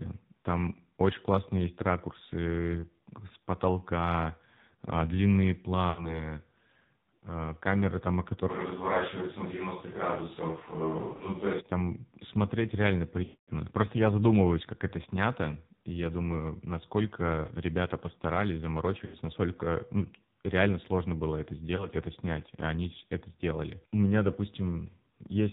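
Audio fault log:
throughout: AMR narrowband mobile codec, and a heavily squeezed one at 5.9 kbps. Everything above 4 kHz is gone, so the speech sounds boxy and phone-like. At this low bitrate the codec drives its vocal tract model with only a handful of pulses per subframe, which leaves the speech buzzy and synthetic and strips out the natural texture.
5.90–6.19, 11.14–11.23, 13.24–13.51, 19.06–19.17 and 21.76–21.88: lost AMR speech frames. Each gap is the decoder covering for frames that failed to arrive intact. It keeps replaying the last good pitch and vocal-tract settings at falling gain, so you hear a smeared, stretched warble rather than clean silence. The 13.24 one is the worst, about 240 ms, long enough to fade out before the speech comes back rough. The 21.76 dropout is a single 20 ms frame, just a quick dip.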